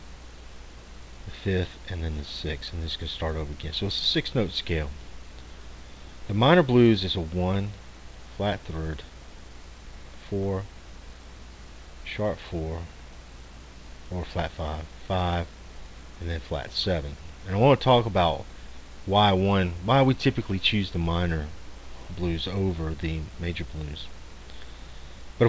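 Nothing stood out on listening, beyond the expected band limit of a G.722 call path with no content above 8 kHz.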